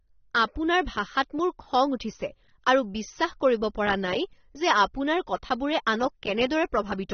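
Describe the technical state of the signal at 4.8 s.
At 4.8 s, as throughout, the speech sounds dull, smeared and warbly, with nothing above 6.3 kHz, likely AAC compression, which fits a bitrate near 27 kbps.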